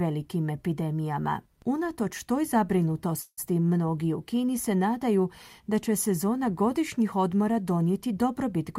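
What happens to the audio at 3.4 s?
At 3.4 s the speech is just coming back from a call audio freeze that started at 3.21 s. It sounds like the last sound gets stretched into a fading buzz, then about 50 ms of silence. That's likely a jitter buffer running dry while packets were held up. Nothing's lost; everything after just runs about 160 ms late.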